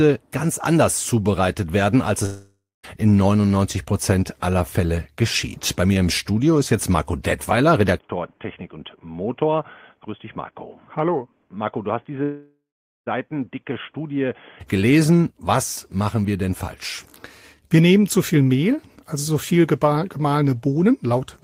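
Right after "anders zubereitet werden als", at 2.25 to 2.85 s, there's a long network dropout, likely from lost packets. The receiver stretches the last sound into a fading buzz for about 0.6 s, the final quarter-second or so goes silent, and the missing audio never comes back. At 7.98 s the sound abruptly turns dull and boxy with no gap, likely because the input switched to a poorer device. Nothing passes above 3.4 kHz, the level falls by roughly 10 dB, and a new noise floor appears well below the signal. At 12.23 to 13.08 s, still on that poorer input, a second long network dropout fills about 0.8 s with fading buzz, roughly half of it silent. At 14.61 s the fuller sound returns.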